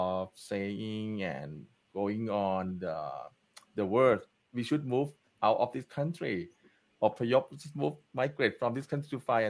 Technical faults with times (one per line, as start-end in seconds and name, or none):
none